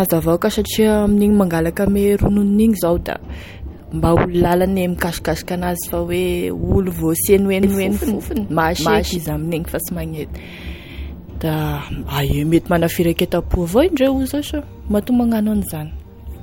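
From 7.63 to 9.17 s, a doubled audio track: an equally loud copy trails roughly a third of a second behind, likely via a slower path, showing as abruptly bounded, offset duplicate waveform envelopes.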